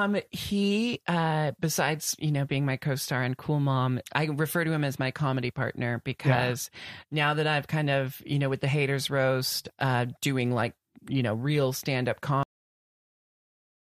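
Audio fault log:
12.43–13.94 s cut-off end: speech halts mid-sound after "know real stand up" because the final buffers were never written. The waveform drops straight to flat digital silence, and the spectrogram goes blank with no decay tail.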